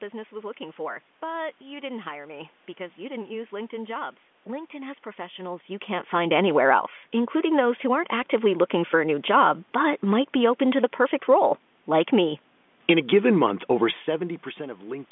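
Speech over a G.711 A-law telephone line at 64 kbps, confined to the 200 Hz to 3.5 kHz line band, with audible room noise and level changes around 5.5 s and 14 s as the talker shifts position; no technical faults found.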